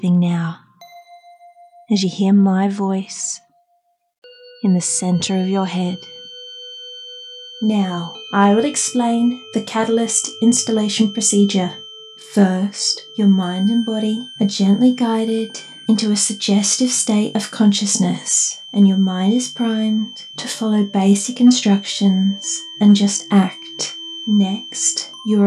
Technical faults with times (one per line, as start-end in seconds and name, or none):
5.09-25.47 feedback whistle